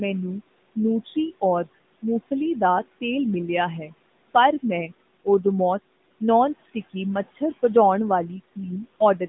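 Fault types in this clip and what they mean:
AMR narrowband mobile codec: The speech sounds thin, boxed-in and buzzy throughout, with nothing above about 3.8 kHz and little below 150 Hz. That points to AMR-NB at roughly 10.2 kbps, whose pulse-driven vocal-tract model leaves plainly audible synthetic colouring on the voice.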